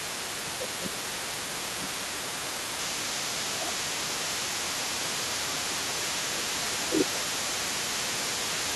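From the start of the recording to the end, a second voice sits underneath the main talker at around 15 dB below it. This is the other side's voice leaking through: the far end is playing on the talker's loudspeaker, is picked up again by the microphone, and is likely not fully removed by the echo canceller.

Speech suppressed in double talk occurs at 0.38 to 2.2 s, 2.99 to 4.26 s, 4.48 to 5.77 s, 6.02 to 6.61 s and 6.85 to 7.09 s. The talker's level drops while the far end is also active, dipping by around 15 dB at its deepest. The near-end speech sounds pushed back or partly missing in these spans. The likely cause is the echo canceller failing to separate the local talker from the loudspeaker echo and attenuating both together.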